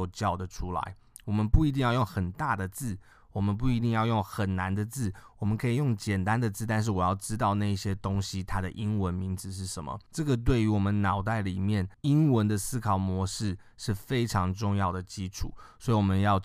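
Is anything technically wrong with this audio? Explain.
No, nothing technically wrong can be heard in this recording.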